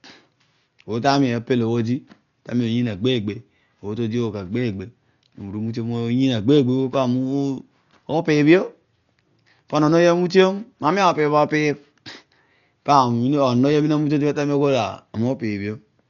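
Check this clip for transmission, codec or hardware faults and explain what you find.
One codec fault runs through the whole speech clip. Throughout, nothing is heard above 7 kHz, and the sound is dull and heavily damaged. A rough, fluttering noise clings to tonal parts. This is likely Dolby Digital compression at a low bitrate, around 48 kbps. Starved of bits, the encoder narrows the band. Many frequency lines get no detail, and the decoder fills them with noise.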